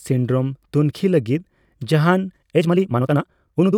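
From 2.28 s to the end, a time-stretched section plays at 1.99 times speed while pitch holds, likely from software dropping short pieces to shorten it. It sounds rushed. A spectrogram shows harmonics compressed in time with unchanged spacing; the waveform shows shortened syllables.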